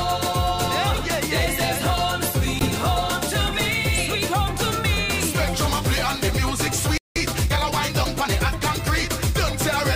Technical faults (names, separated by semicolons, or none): Bluetooth dropout; playback stall; time-compressed catch-up